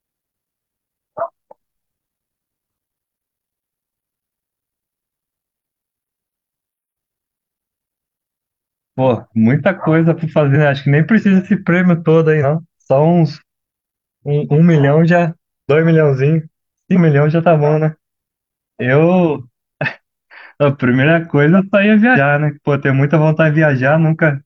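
The decoder lost compressed frames at 10.52, 12.40, 16.92 and 22.12 s. At each point the speech jumps ahead by roughly a tenth of a second at the first two and about 150 ms at the last two, which fits two or three missing 43 ms frames.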